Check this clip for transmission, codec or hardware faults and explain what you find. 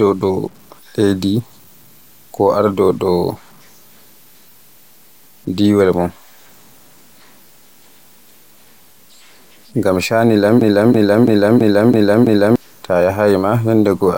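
Two faults are audible in this speech clip: grainy quantisation distortion throughout, and a stuck repeating fragment near the end.

Low bit depth without dither runs through the whole clip. The grit rises and falls with the speech and sits roughly 35 dB below it. This points to truncation to about 8 bits. Unlike steady hiss from a noisy channel, this error follows the signal.

A broken-record loop runs from 10.61 s to 12.56 s, just after "ngam shanu". A 0.33 s fragment repeats six times back to back, likely because the stream or player stalled and kept resending its last buffer. Unlike a stutter or echo, the repeats are identical and nothing new arrives until the loop ends.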